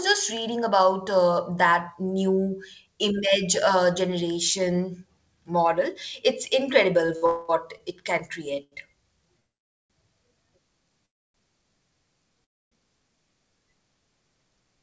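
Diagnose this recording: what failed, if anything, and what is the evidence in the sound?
The network and jitter-buffer stage failed. Between 7.06 and 8.02 s the speech drags in repeated stalls (stutter). There are four short holds, about 99 ms in total, and the longest is 55 ms. Packets were arriving late or more slowly than they were played out. The buffer kept running dry, and the receiver held the last sound each time. Nothing is lost, but the rhythm stumbles.

There are four call audio freezes. At 7.26 to 7.50 s the last sound is held for 226 ms as a fading buzz or hiss with no silence. At 9.40 to 9.92 s a 500 ms gap is mostly silent, about 480 ms. At 11.06 to 11.36 s the gap is 286 ms, and at 12.44 to 12.73 s it is 272 ms, both almost entirely silent. Each time, speech resumes exactly where it stopped. The likely cause is packets held up in transit until the buffer emptied.

At 8.64 to 8.74 s there is a short stall from a late packet. 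One sound is stretched for 78 ms with a slight buzz or dip, then continues from the same place. A single packet missed its playout time, and the receiver extended the previous audio until it arrived. Nothing is skipped. The band-limited sound, with nothing above 8 kHz, fits a G.722 call codec at 64 kbps.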